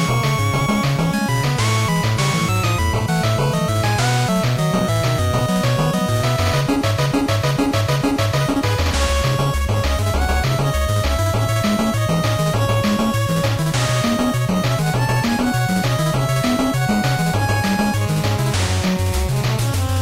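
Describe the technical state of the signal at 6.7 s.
At 6.7 s the signal is intact, with no dropout, distortion or other fault.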